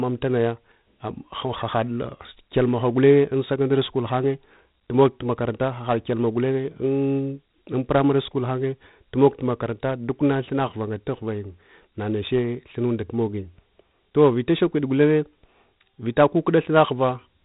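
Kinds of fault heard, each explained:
4-bit ADPCM compression: samples coded as adaptive steps from a prediction; heavy gritty hiss tracks the speech level, nothing above 3.8 kHz, fitting a 32 kbps stream.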